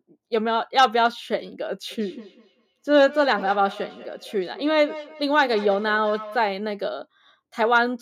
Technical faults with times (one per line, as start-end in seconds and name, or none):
1.91-6.46 feedback echo between two devices